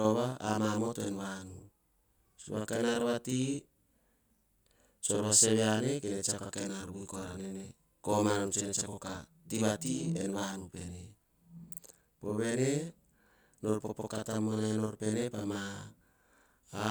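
Channel delay (doubling) runs through the whole recording: one channel trails the other by about 46 ms, which fits a 2048-sample buffer, and when both are folded to mono the late copy stands apart, giving the speech an equal-level doubling like a single slap echo.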